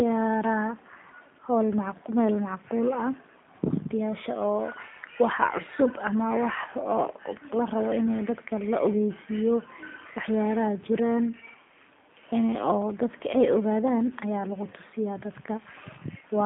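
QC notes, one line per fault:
Throughout, G.729 codec: the speech is confined to a telephone band of roughly 150 Hz to 3.6 kHz, with nothing above 3.8 kHz, and carries a plainly rough, synthetic buzz. Plain bandlimiting would leave the sound smooth. This texture comes from rebuilding each 10 ms frame from a filter, a pitch predictor and a few pulses, which fits an 8 kbit/s G.729A coder.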